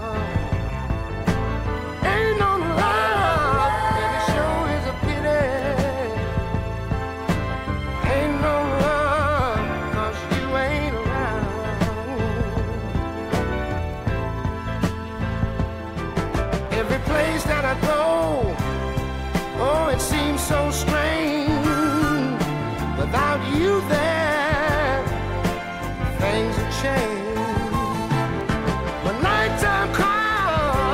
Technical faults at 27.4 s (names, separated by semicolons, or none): none